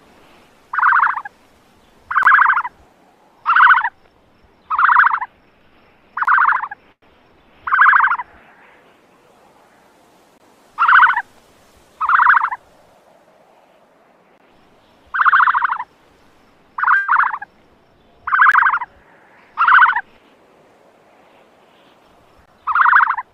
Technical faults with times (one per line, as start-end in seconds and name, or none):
2.23 gap between chunks
6.25-6.27 gap between chunks
6.92-7.05 call audio freeze
10.38 gap between chunks
14.38 gap between chunks
16.96-17.11 call audio freeze
18.52 gap between chunks
19.04-19.54 jitter buffer speed-up
22.46 gap between chunks